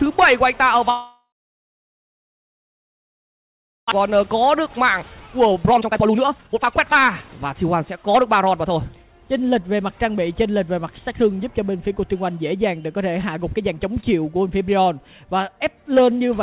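Long network dropout, 0.9 to 3.94 s: the sound stops being refreshed and the last moment is stretched into a buzzy, fading tail, which collapses within a few tenths of a second into about 2.6 s of silence. This is likely a stall in packet delivery. The receiver concealed the gap for about 3 s, and when audio resumed, roughly 1.6 s of the original had been skipped and was never heard. Jitter buffer speed-up, 4.04 to 8.70 s: the late packets arrived in a burst, leaving the buffer overfull by well over a second of audio. The receiver drained that backlog by cutting out tiny pitch-period-sized slices again and again, so the audio plays at about 129% speed with its pitch unchanged and sounds rushed. Around one and a half seconds disappear this way. Throughout the clip, nothing is present above 4 kHz, with the grainy coding noise of a narrowband call path, which fits G.711 mu-law at 64 kbps.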